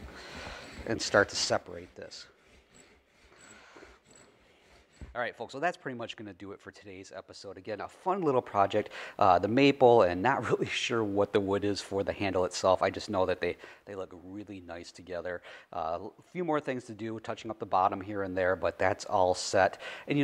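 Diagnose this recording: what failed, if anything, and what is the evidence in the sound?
Zipper noise from an unsmoothed gain stage: ticking at roughly ten steps a second during level ramps at 7.42–8.79, 13.48–14.00 and 17.41–18.94 s, never between.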